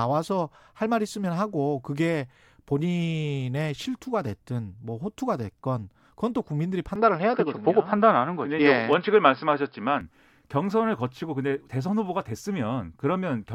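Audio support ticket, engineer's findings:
Speech turns dull from 6.96 s to 10.01 s, then clears. Likely input switched to a poorer device. Spectrogram: hard ceiling at 5.3 kHz across that span, no gap at switch. Waveform: level shift of about 5 dB; new noise floor roughly 45 dB down.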